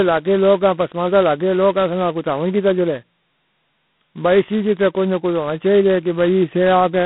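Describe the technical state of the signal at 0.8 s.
At 0.8 s, as throughout, G.726 ADPCM at 16 kbit/s leaves only 2 bits per predicted difference, adding harsh, level-following rasp; the spectrogram shows broadband grit and nothing above 3.9 kHz.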